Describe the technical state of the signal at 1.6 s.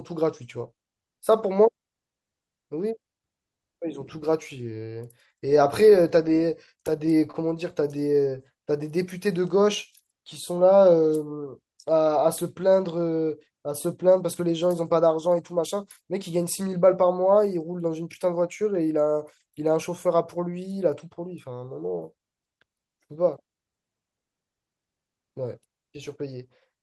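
At 1.6 s the speech signal is intact, with no technical fault present at that moment.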